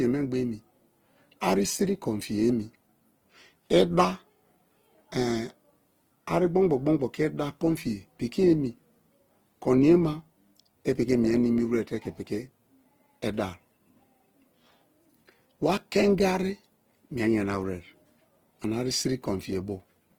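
Through the whole clip the speech sounds grainy and rough, with a noisy texture in place of clean tones. The likely cause is Opus compression in its music mode, at a low bitrate near 16 kbps. The encoder fills starved bands with folded or noise content. Bandwidth stays full, reaching about 20.2 kHz.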